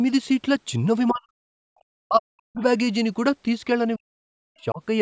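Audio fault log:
1.1–1.67 s, 2.04–2.62 s, 3.97–4.81 s: speech suppressed in double talk. The speech sinks by up to about 40 dB, likely because the echo canceller mistook overlapping talk for echo. The waveform shows collapsed stretches.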